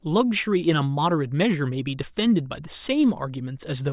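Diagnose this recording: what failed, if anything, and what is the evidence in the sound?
Nothing in the recording stood out as a failure on listening, at any stage of the chain.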